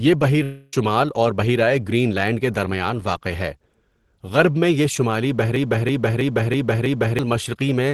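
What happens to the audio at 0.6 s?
Right there the sound turns into a smeared, fading buzz from 0.43 to 0.73 s, likely a long network dropout, with the receiver stretching the last audio over the missing stretch.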